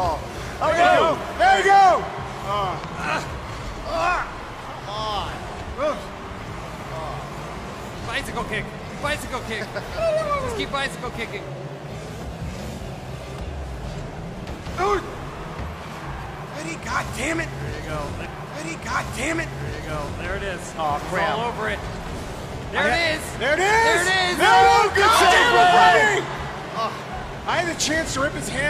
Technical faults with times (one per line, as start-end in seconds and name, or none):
2.84-3.06 loud pop
18.21-20.20 stream segment repeated